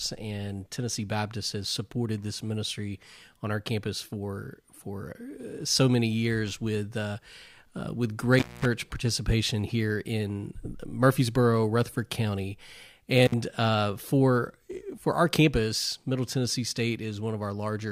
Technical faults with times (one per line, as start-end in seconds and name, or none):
8.39-8.65 intermittent contact
13.26-13.34 intermittent contact